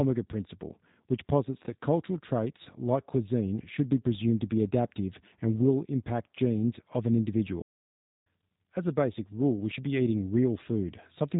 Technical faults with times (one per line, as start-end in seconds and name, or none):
0.00-11.39 G.729 codec
7.62-8.26 playback stall